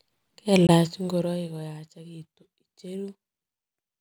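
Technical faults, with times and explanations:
0.67–0.69 s, Bluetooth dropout: the speech cuts to silence for 19 ms, then resumes as though it had kept playing, which fits one packet that likely arrived too late.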